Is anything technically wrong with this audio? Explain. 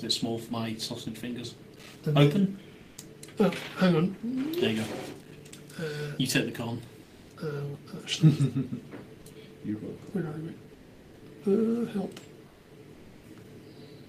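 Yes. At 2.81 to 2.97 s, 7.03 to 7.29 s, 10.73 to 11.21 s and 12.47 to 12.71 s, the sender likely stopped transmitting during quiet stretches, and the receiver filled them with comfort noise in place of the background. The real background, about 25 dB below the loud parts, becomes a flat, featureless hiss, about 2 to 6 dB quieter.

From 5.20 to 5.53 s there is processor overload crackle. The processor repeatedly failed to deliver its small buffers on time, and each miss dropped in a brief silent gap, which fits buffers of around 5 ms with several missed in a row. The result is a gritty burst of crackle.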